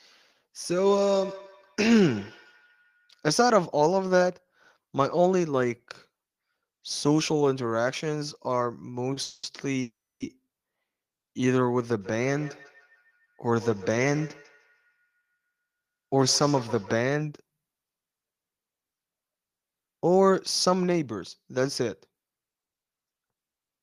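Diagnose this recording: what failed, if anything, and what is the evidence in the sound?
Feedback echo between two devices, at the call-processing stage, from 0.84 to 3.33 s and again from 12.01 to 17.05 s. The speech comes back roughly every 150 ms at about 16 to 17 dB below the talker, thin and ringing, because a second device's speaker feeds the first device's mic, whose echo canceller only removes what its own device plays.

Short stall from a late packet on the network side at 9.13 s. One sound gets held for about 30 ms with a faint buzz or dip, then picks up exactly where it left off, so nothing's lost. The packet just arrived after the jitter buffer had run dry.

Call audio freezes at 9.22 to 9.45 s and 9.81 to 10.22 s. The first fills 210 ms with a fading buzz or hiss. The second holds for 390 ms, of which 290 ms goes silent. Then the speech resumes with nothing skipped, likely from held-up packets emptying the jitter buffer.

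Jitter buffer speed-up from 21.21 to 22.92 s. The speech runs at about 109% with its pitch unchanged, so it sounds a bit rushed. The receiver is trimming short pitch-period slices, around 150 ms in total, to burn off the extra buffered delay.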